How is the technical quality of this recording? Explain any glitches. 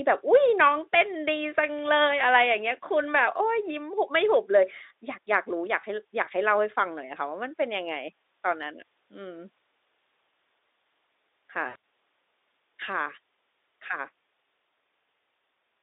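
Two short glitches are audible, both VoIP packet loss concealed by the speech codec; the Speex codec itself carries the telephone band of about 300 Hz to 3.7 kHz.

At 5.81 s, for about 30 ms, a gap fitting one lost 20 ms frame is filled by the decoder repeating its last pitch and filter at falling gain.

At 11.67 s the same happens more widely. About 140 ms goes missing, scattered over 160 ms, with the longest run 80 ms.

Unlike a plain dropout to silence or a click, the sound here is stretched and fading rather than cut, and it recovers gradually.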